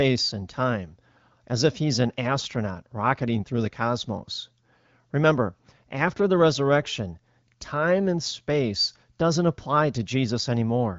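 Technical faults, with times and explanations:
No technical faults are audible anywhere in this recording.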